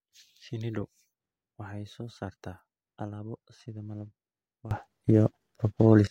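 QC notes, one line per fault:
4.71–6.07 s, sudden gain jump: at 4.71 s the level steps up by about 17 dB from one sample to the next and stays raised until 6.07 s. The speech and the background noise rise together, which points to a gain change in the digital path rather than the talker. The likely cause is a gain setting or bit shift applied without a ramp. On the waveform the envelope widens abruptly at that instant. On a spectrogram the noise floor brightens across all frequencies in a vertical edge.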